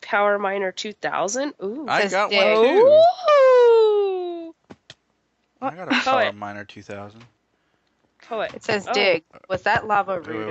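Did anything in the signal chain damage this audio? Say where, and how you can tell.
No, nothing in the signal chain has left any audible damage on this audio. No stage between capture and playback leaves a trace in the sound.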